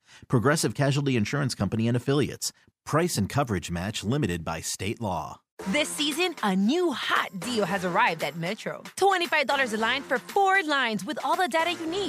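No dropouts, clipping, glitches or other transport faults are audible anywhere in the clip.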